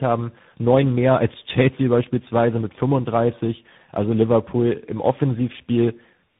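From start to finish the speech carries tandem speech coding: it sounds as though it passed through three separate speech coders in sequence, consistent with a GSM full-rate stage, then AMR-NB, then CVSD, with G.711 links between them. Each coder re-encodes the previous one's errors, so the artefacts compound: the speech is rough and warbly, and it is muffled, with nothing above 3.8 kHz.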